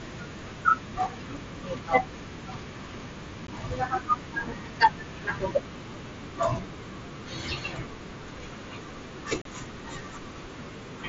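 At 3.47 s the speech drops out for about 15 ms, then again from 9.42 to 9.46 s for about 37.5 ms. That's unconcealed Bluetooth headset packet loss. Voice packets between headset and phone went missing and nothing patched the gaps, so you hear short silent holes with hard edges. The gap lengths fit two and five lost 7.5 ms frames on the mSBC link.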